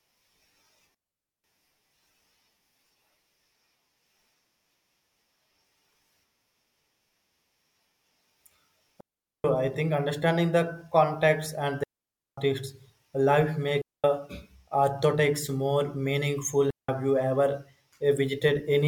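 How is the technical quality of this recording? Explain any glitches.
The recording has five digital wireless dropouts. At 0.94–1.44 s, 9.00–9.44 s, 11.84–12.38 s, 13.82–14.04 s and 16.71–16.89 s, the link lost too much data and the receiver muted. Each gap, lasting 0.18 to 0.54 s, cuts the speech into clean near-silence with no noise burst either side.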